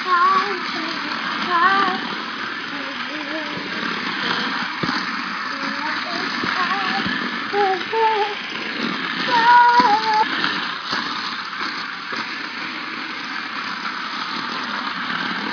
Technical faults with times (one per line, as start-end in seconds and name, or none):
none